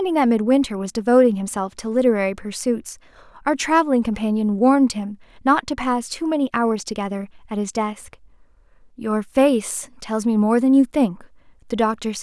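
No technical faults are audible anywhere in the speech recording; nothing to flag.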